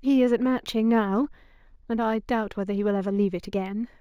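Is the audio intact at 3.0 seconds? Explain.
No. At 3.0 s, as throughout, there is imaging from linear upsampling: straight-line interpolation, which fits a 16 kHz source raised to 44.1 kHz, dulls the top of the band and leaves a faint mirrored copy from 8 to 16 kHz, roughly 40 dB down. It adds a light metallic shimmer to sibilants and shows on a spectrogram as a pale reflected band above 8 kHz.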